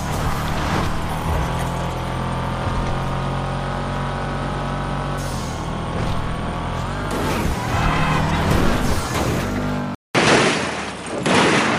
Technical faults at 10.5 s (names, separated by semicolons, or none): input switched to a poorer device